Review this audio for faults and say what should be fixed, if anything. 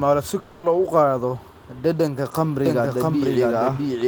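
From 0.39 to 0.66 s the sound breaks up into a fading buzz. This is a long network dropout, likely. About 240 ms of audio never arrived. The receiver filled that gap by stretching the last sound it had, and the fill decays as it goes. No true silence is left. When the audio returns at 0.66 s, the lost part is simply gone. A larger jitter buffer and packet redundancy, such as forward error correction, would prevent this.

From 2.66 s to the end, a doubled audio track is heard. A second copy of the speech runs about 0.7 s behind the first. It is roughly as loud as the original. It has no reverb tail or room colour, so it is not an echo. It starts abruptly and lasts until the clip ends. The likely cause is a second, slower capture path feeding the same mix. Muting or removing the duplicate route would prevent it.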